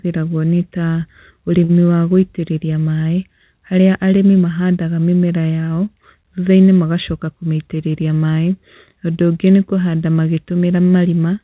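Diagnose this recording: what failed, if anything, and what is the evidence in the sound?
A short stall from a late packet hit the network and jitter-buffer stage at 1.64 to 1.72 s, just before "wa gũitĩrĩria maĩ haria". A packet was late, the buffer ran dry, and the receiver stretched the last sound by 48 ms until the data arrived. Nothing was dropped, so speech resumes where it left off, but the held sound drags with a faint buzz or dip. The whole stream now sits 48 ms later.

A jitter buffer speed-up follows at 7.12 to 7.52 s, again in the buffer stage. Having collected more audio than its target, the receiver trimmed repeated slivers of a pitch period or so, about 40 ms in total, to reduce the delay. Speech there runs at 109% of normal speed with pitch unchanged and sounds briefly hurried. The band-limited G.711 call sound, with nothing above 4 kHz, continues throughout.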